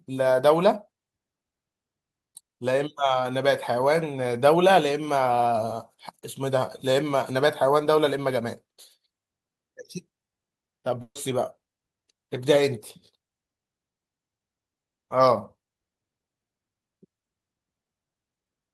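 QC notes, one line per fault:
11.01–11.17 s, burst of packet loss: a run of lost or late packets leaves a gap. The receiver repeats the last speech sound for about 140 ms, fading it, with about 50 ms of silence. Speech resumes with 140 ms missing.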